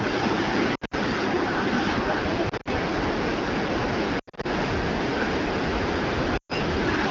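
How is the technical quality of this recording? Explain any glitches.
The recording has four bursts of lost AMR speech frames. The wideband coding beneath them sounds light and clean, consistent with AMR-WB at 12.65 kbit/s. The dropouts fall at 0.75–0.94 s, 2.49–2.68 s, 4.19–4.46 s and 6.37–6.54 s, totalling about 120, 80, 160 and 120 ms of missing audio. When a frame is lost, the decoder repeats the last good pitch and vocal tract settings at falling gain. Each gap therefore smears into a brief warble that fades out, with the longest runs in the first three bursts lasting 40 to 80 ms, before the voice returns weak or rough for a moment.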